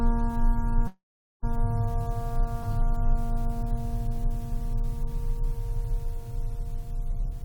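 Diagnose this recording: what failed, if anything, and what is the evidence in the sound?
Network stage, call audio freeze: from 0.87 to 1.45 s the music stops and the last sound is extended as a short fading buzz, then about 0.43 s of silence. Playback resumes where it left off, so nothing is lost; likely delayed packets emptied the jitter buffer.

Buffer stage, jitter buffer speed-up: from 7.11 to 7.44 s the music runs at about 117% speed with unchanged pitch and loses its steady tempo. The receiver is trimming pitch-period-length pieces, roughly 50 ms in total, to drain excess buffered audio.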